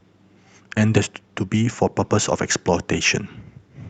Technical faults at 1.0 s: skip ahead; jitter buffer speed-up

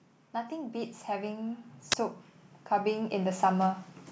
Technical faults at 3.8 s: automatic gain rising

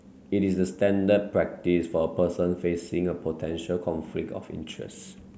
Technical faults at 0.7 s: none

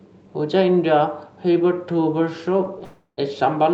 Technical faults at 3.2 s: call audio freeze

